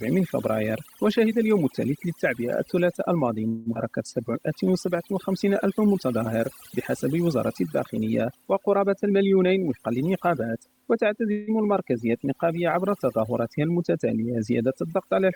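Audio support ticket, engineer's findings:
Whole clip, overdone noise removal: background pulled down and broken into twinkling specks. Noise suppressor set too aggressive, gating individual frequency bands near its noise estimate and taking quiet speech detail with them.

3.47–3.69 s and 11.32–11.50 s, call audio freeze: sound stalls and is extended as a fading buzz for about 190 ms and 160 ms, then resumes where it stopped with nothing lost. Likely late packets draining the jitter buffer, receiver concealing the wait.

3.74–3.78 s, skip ahead: playback jumps forward almost seamlessly, roughly a tenth of a second of speech missing across the join. Stretch dropped in transit or discarded by the jitter buffer while later audio was already queued.

3.89–5.89 s, jitter buffer slow-down: speech drawn out to 94% speed at unchanged pitch, 122 ms added in total. Receiver repeating single pitch periods and pause fragments to rebuild the buffer reserve.

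9.08–10.50 s, jitter buffer speed-up: speech hurried to 113% speed at unchanged pitch, about a fifth of a second removed overall. Buffer holding more than its target, receiver cutting short pitch-period pieces repeatedly to bring delay back down.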